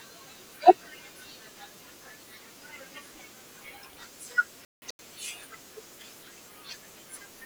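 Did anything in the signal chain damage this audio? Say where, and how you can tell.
Yes: a corrupt frame muted dropout from 4.65 to 4.99 s at the codec stage. The speech cuts abruptly to silence for 0.34 s, likely a run of damaged compressed frames the decoder rejected.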